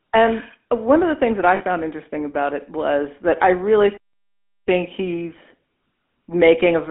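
GSM full-rate codec damage runs through the whole speech clip. The sound sits in a narrow line band of roughly 250 Hz to 3.5 kHz, and a rough, buzzy grain comes from the codec modelling the vocal tract and driving it with a sparse, regularly spaced pulse excitation, which fits the 13 kbps full-rate coder.

Lost GSM frames follow from 1.56 to 1.62 s, between "the things that I" and "interesting about it was". For about 40 ms the decoder repeats the last good frame's settings, so the speech briefly freezes into a metallic, ringing smear.

A playback stall cuts in at 3.97 s, right after "was that I really", and the output stays silent until 4.68 s, a gap of about 0.69 s. The sound stops in mid-flow and then resumes, likely because the player ran short of data or its thread was blocked.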